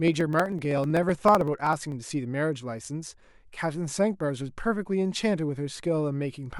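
From 0.08 to 1.92 s there are periodic USB or driver dropouts: every 63.5 ms something stalls the audio path and roughly half a millisecond of speech is skipped outright. You hear around thirty evenly spaced little ticks riding on the voice, about sixteen per second.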